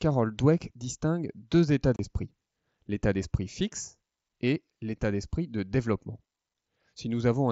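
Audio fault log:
1.96–1.99 s, unconcealed Bluetooth headset packet loss. The sound cuts out for 30 ms, which fits four lost headset packets. Nothing fills the gap. It becomes a short hole with abrupt edges, so the sound breaks off and restarts sharply.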